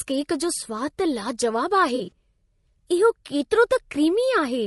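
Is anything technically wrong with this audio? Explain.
Yes, there are two problems. Throughout, the speech sounds rough and grainy, with noise filling the gaps between harmonics and a thin, synthetic-sounding top end. That's likely low-delay AAC compression: its short frames resolve pitch poorly, and the damage fits a bitrate around 32 kbps.

From about 1.95 to 2.11 s there's AAC frame loss with concealment. Short chunks, the longest a few tens of milliseconds, went missing and the decoder patched them from the last good spectrum. It comes across as a brief smeared, phasey patch, consistent with four lost frames.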